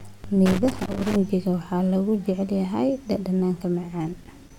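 From 0.46 to 1.16 s, just before "waxaa lagu jecel", loose connector crackle: a faulty contact chops the speech, showing as broadband vertical streaks and jagged waveform dropouts.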